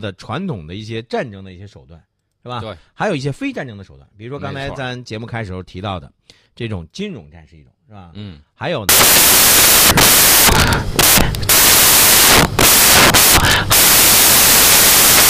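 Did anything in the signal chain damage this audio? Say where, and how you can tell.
Yes: from 8.89 s to the end, sample-format conversion builds samples from the wrong bytes, so low bits dominate, giving loud, harsh noise close to white on loud sounds, unlike steady hiss.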